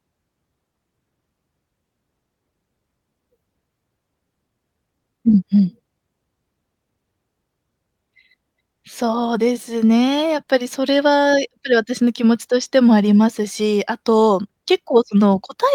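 Nothing in the speech recording stood out as a technical fault on listening.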